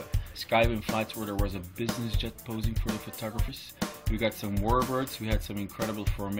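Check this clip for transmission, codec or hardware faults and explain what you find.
One codec fault is present. Compressed frames skipped at 3.47 s: about three 23.2 ms frames never play, so the audio jumps ahead around 70 ms. The join is heard as a brief jump in the audio.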